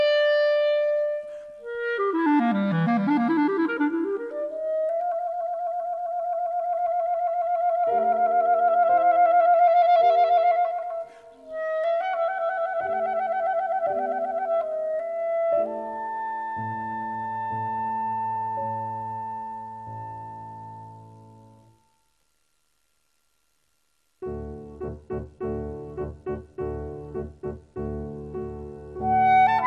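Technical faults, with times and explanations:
No technical faults are audible anywhere in the signal.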